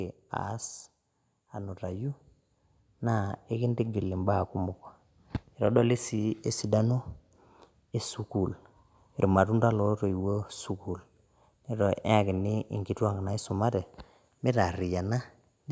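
From 3.0 s to 4.86 s the speech goes through automatic gain rising: the level control judged the input too quiet and lifted its gain by about 4 dB over nearly two seconds. Voice and background noise swell together, so the room tone grows along with the speech. That shared, slow climb sets it apart from compressor pumping, which ducks and recovers around each loud syllable. The call's microphone processing, with nothing above 8 kHz, is not a fault.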